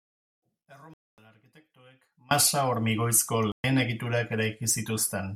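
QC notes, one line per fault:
0.00–2.31 s, audio dropout to a faint residue: the speech is already gone when the clip opens, leaving only a faint trace about 30 dB down, likely from a lost feed on a still-live path. The waveform is a near-flat band that jumps abruptly to full level at 2.31 s.
0.94–1.18 s and 3.52–3.64 s, Bluetooth dropout: hard silent holes of 244 ms and 122 ms, likely from late wireless packets being discarded. On a spectrogram these show as blank vertical gaps with sharp edges, and the sound resumes as though it had kept playing.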